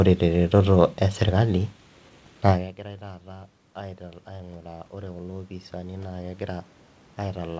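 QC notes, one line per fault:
2.82 s to the end: automatic gain rising. After the talker moves away near 2.5 s and the input drops by about 23 dB, the gain control climbs gradually to compensate. Unlike a talker returning, the room noise swells along with the voice.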